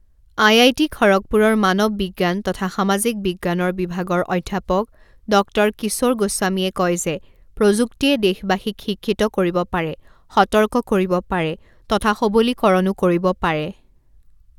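No technical faults can be heard anywhere in the recording. Nothing in the speech calls for a timestamp or an explanation.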